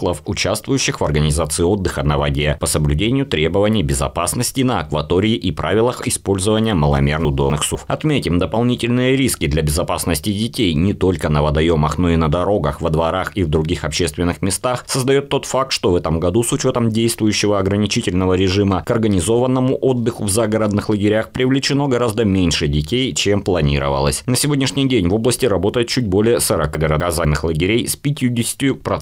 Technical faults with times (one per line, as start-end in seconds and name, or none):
7.25-7.75 chunks out of order
26.75-27.25 chunks out of order